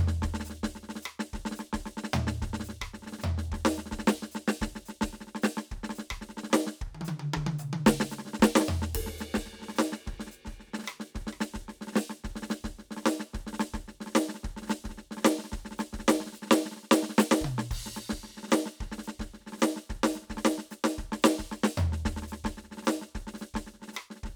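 Music, with no technical faults detected anywhere in the clip.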